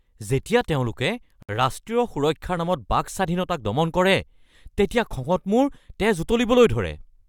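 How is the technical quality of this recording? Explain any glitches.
The recording has one glitch, a gap at a join of encoded pieces. From 1.43 to 1.49 s, the speech stops for about 63 ms and then resumes exactly where it left off. The audio appears to have been encoded in separate pieces and joined untrimmed. Each encoder pass adds leading silence and pads its final frame, and that dead space stayed in. You hear a sudden dropout with smeared edges.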